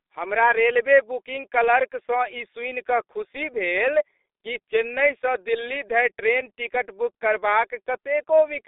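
G.723.1 codec damage runs through this entire speech clip: the sound is muffled and hoarse, confined to a telephone band of roughly 300 Hz to 3.7 kHz with nothing above 3.8 kHz. The slow, coarse 30 ms frame coding, consistent with a rate near 6 kbit/s, heavily blurs consonants.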